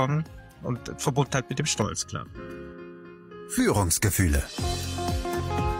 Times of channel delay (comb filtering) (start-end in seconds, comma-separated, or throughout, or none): 1.82-3.60